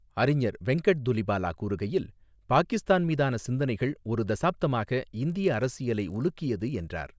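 From 5.3 s to the end of the speech, the sample-rate conversion from 24 kHz to 16 kHz behaves like a resampler restarted on every block. Each 20 ms block is converted in isolation, so the filter at every edge lacks the real neighbouring samples and introduces a small discontinuity. These repeat at 50 Hz, giving a steady buzz under the speech that rides on the signal and drops away in pauses.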